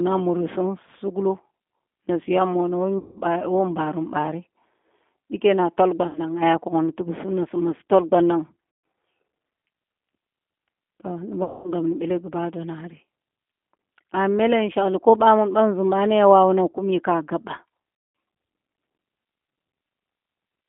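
From the start, the speech has the sound of a G.729 codec. Nothing reaches below about 200 Hz or above 3.5 kHz. The result is thin and boxed in. The codec rebuilds each short frame from a filter model of the throat and mouth, a pitch guess and a few coded pulses. That makes the voice rough and slightly synthetic throughout, which fits an 8 kbit/s G.729A link. The damage is plainly audible.

Five dropouts follow, each one VoIP packet loss concealed by the speech codec. The first runs from 2.98 to 3.21 s and covers about 180 ms of missing audio. The next runs from 6.07 to 6.21 s, about 80 ms. Another comes at 8.73 s, about 140 ms. The last two run from 11.44 to 11.72 s and from 17.95 to 18.15 s, each about 200 ms. The loss sizes fit 20 ms packets. In each gap, the decoder repeats its last pitch and filter at falling gain. So the voice smears into a fading buzz or coloured noise. Because each frame builds on the one before, it stays weak for a moment after the gap.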